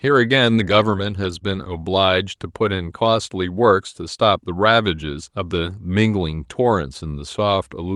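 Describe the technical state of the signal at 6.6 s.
At 6.6 s the speech signal is intact, with no audible fault at that moment.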